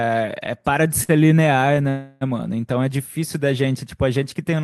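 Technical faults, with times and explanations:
1.03–1.24 s, short stall from a late packet: a packet arrived late and the jitter buffer ran dry, so the last sound is held about 53 ms too long with a slight buzz or dip.
1.89–2.23 s, call audio freeze: packets were likely held up in transit, emptying the buffer; the last sound is continued as a fading buzz or hiss for about 316 ms, then resumes unbroken.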